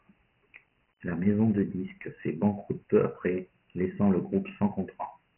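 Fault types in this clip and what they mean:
Dialogic VOX ADPCM: The speech was stored in the 4-bit Dialogic (OKI) ADPCM format used for phone menus and voicemail, at a rate that fits 6,000 samples a second, about 24 kbps. That sampling rate leaves nothing above 3 kHz, so the speech sounds narrow and muffled throughout. The coarse 4-bit steps damage it heavily, leaving a gritty hiss that tracks the speech and rises and falls with it.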